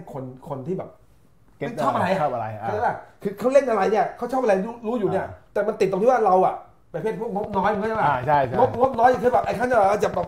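A train of clicks runs from 7.44 to 10.24 s: about thirty similar pulses at a regular 10 per second, roughly 5 dB above the sound, likely from electrical interference.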